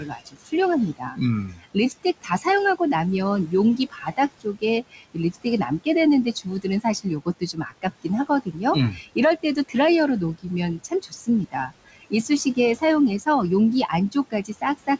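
Noise suppressor artifacts run through the whole speech clip. The suppressor pulls down each frequency band it judges to be steady noise by about 19 dB, frame by frame. So the room noise, which sits about 16 dB under the speech, dips in the gaps and swells back beneath the talker. On a spectrogram the background shows as blotchy, flickering patches that vanish between phrases rather than an even haze. The G.722 call path caps everything at 8 kHz, a flat ceiling across the image.

Speech cut by the noise suppressor appears in seven stretches: 0.00 to 0.53 s, 0.97 to 2.46 s, 3.47 to 5.87 s, 6.33 to 8.58 s, 8.93 to 9.76 s, 10.78 to 12.82 s, and 13.89 s to the end. The suppressor mistakes quieter parts of the speech for noise and turns them down with the background, usually by about 20 dB, though only about 13 dB in the 8.93 s stretch. Within most stretches roughly half a second or more is affected, though only about 0.3 s in the 8.93 s stretch, so soft consonants and word endings sound swallowed or faint. 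In the waveform, syllable tails drop abruptly. On a spectrogram, weak high-frequency consonant energy is carved out and leaves dark holes.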